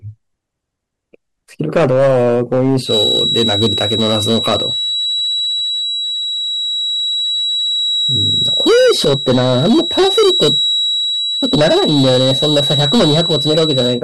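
A speech recording with hard clipping from start to finish: the level is driven roughly 11 dB beyond what the chain can pass, so peaks are sliced flat on about 7 percent of samples, giving a harsh fuzz on louder syllables and high harmonics the speech itself lacks. From 2.81 s to the end a feedback whistle sits at about 3.9 kHz, a thin tone swelling and fading slowly and only a few dB under the speech, likely from a loudspeaker-to-microphone loop held just at the edge of feedback.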